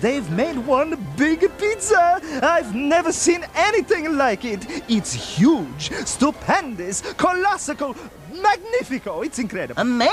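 No technical faults can be heard anywhere in the signal.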